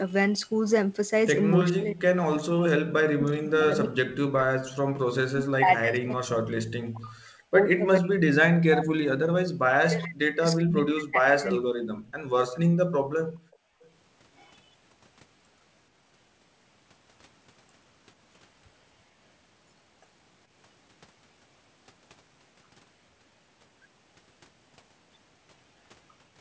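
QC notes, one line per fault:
1.73–4.61 s, 5.19–9.18 s and 9.64–11.68 s, speech suppressed in double talk. The speech sinks by up to about 40 dB across each span. The likely cause is an echo canceller that cannot tell the talker from loudspeaker echo during overlapping talk, so it turns both down.
12.07–12.14 s, 13.52–13.56 s and 13.85–13.90 s, echo leak. Faint scraps of the speech return about 0.42 s late, roughly 35 dB below it. These likely come from a far-end loudspeaker whose echo canceller lets a little of its microphone pickup slip back.
12.17–12.29 s and 12.90–13.82 s, background gated by the echo canceller. The room sound drops by about 37 to 38 dB, briefly and then for most of a second, before returning. The canceller clamps the microphone hard while the loudspeaker plays, and releases it afterwards.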